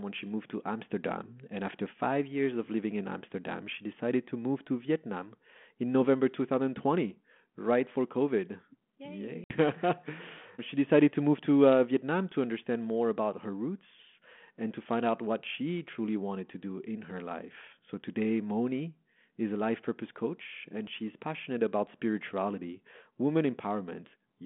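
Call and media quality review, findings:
Hard-edged dropout at 9.44–9.54 s: audio cuts to dead silence for about 60 ms, then resumes slightly distorted, settling within tens of milliseconds. Packet loss on an ADPCM call, about three packets lost and filled with silence. The G.726 decoder's adaptive predictor and step size drift from the sender's state on the 32 kbit/s, 200–3400 Hz link, so the decoder mis-scales the audio on resumption until it re-converges.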